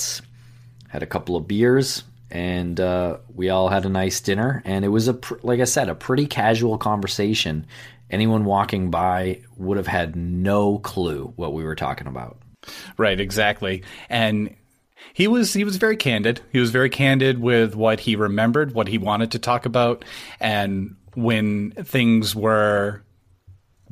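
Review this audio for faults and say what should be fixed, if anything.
No faults found; nothing needs fixing.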